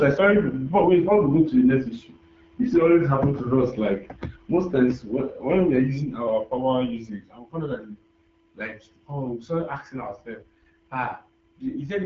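Speech coded throughout with the AMR wideband (HD Voice) codec sounds rough and raspy, consistent with one of its lowest rates, around 8.85 kbit/s, with nothing above 7.5 kHz.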